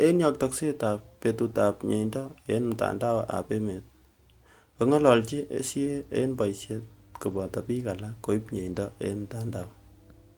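From 5.17 s to 10.33 s a steady 50 Hz mains hum sits well below the speech. A ground loop or nearby transformer is leaking power-line current into the signal.

At 7.23 to 7.41 s and 8.59 to 8.77 s, lost packets were rebuilt from error correction. Low-bitrate backup copies fill the gaps, so the speech turns briefly rough and noisy without dropping out.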